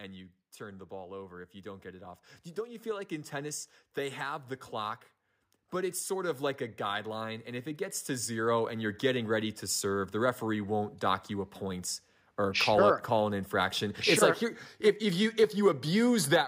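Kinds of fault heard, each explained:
Automatic gain rising: the speech and the background noise beneath it swell upward together, each time climbing by about 8 dB, first slowly from 0.57 to 5.03 s and then again from 5.7 to 9.3 s. Because the voice and the room noise rise in step, the change comes from the recording chain, not the speaker. The automatic gain control judged the input too quiet and steadily raised its amplification to compensate.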